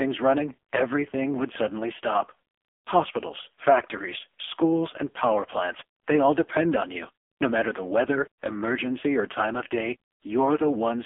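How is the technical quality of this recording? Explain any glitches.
The quality is poor, with one fault running through the whole recording. The speech sounds thin, buzzy and synthetic throughout, confined to roughly 250 Hz to 3.4 kHz with nothing above 3.5 kHz. That is the AMR narrowband mobile codec at heavy compression, consistent with its low bitrate of about 5 kbps. It rebuilds each 20 ms frame from a vocal-tract model and a few pulses, so little natural detail survives.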